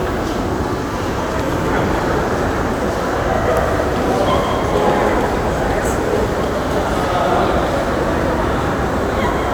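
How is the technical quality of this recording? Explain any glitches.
No glitches or technical faults can be heard here.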